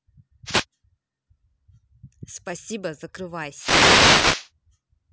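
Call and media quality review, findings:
Wireless microphone noise hit, 0.45–0.65 s and 3.53–4.50 s. Analogue FM link fading as multipath reflections cancel the carrier; receiver noise rises through the speech. Heard as a brief static swish at 0.45 s, then a longer burst of nearly 1 s.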